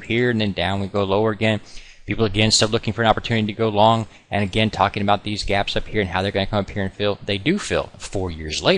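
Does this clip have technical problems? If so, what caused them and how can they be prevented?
Yes. Three sharp, isolated clicks sound at 0.87, 3.99 and 5.51 s, each a thin vertical line across the spectrum. They are likely dropped samples: a fraction of a millisecond of the stream goes missing, so the waveform jumps abruptly to a later value. Keeping the capture and playback buffers large enough to avoid underruns, and giving the audio thread priority, prevents such gaps.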